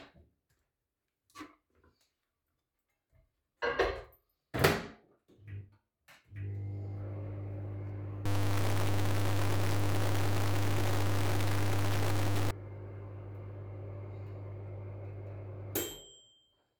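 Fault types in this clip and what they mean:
Low bit depth without dither: from 8.26 to 12.51 s the sound turns coarse and grainy, with distortion that tracks the signal and an error about 5 dB louder than the signal itself, likely from truncation to very few bits, consistent with about 4, without dither.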